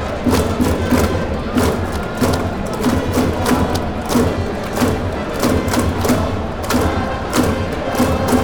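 Nothing in this recording of everyday sounds stands out as a technical problem.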